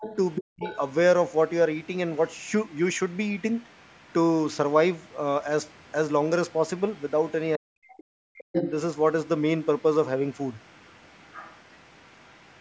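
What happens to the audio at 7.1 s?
At 7.1 s you're in the middle of a short stretch, from about 6.5 to 7.32 s, where the other side's voice leaks through. A second, very faint voice sits underneath, roughly 35 dB below the main talker. It's most likely residual echo: the talker's loudspeaker played the far end, the microphone picked it up, and the echo canceller didn't fully remove it before the call's normal microphone processing passed it on.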